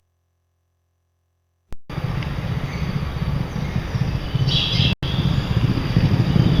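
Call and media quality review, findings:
Dropout to silence, 4.93–5.03 s, roughly 97 ms, then playback resumes. Component: Bluetooth link to headphones, a likely Bluetooth stall. Radio interference delayed packets, receiver buffer emptied, output paused until retransmitted packets arrived.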